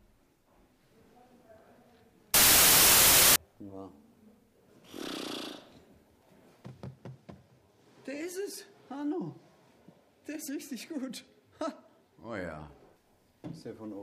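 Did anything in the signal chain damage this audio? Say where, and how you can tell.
Yes: sample-format conversion read 32-bit samples as 16-bit, a wrong sample width, so 2.34 to 3.36 s becomes loud noise over half-speed, octave-lowered sound.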